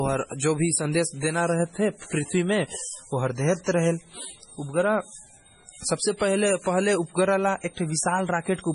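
MP3 compression is the likely cause of the damage heard throughout the speech. Nothing sounds above 10.5 kHz, and the heavy artefacting fits a bitrate near 24 kbps. At that rate the encoder drops weak frequency lines that flicker between frames, leaving a watery, smeared texture.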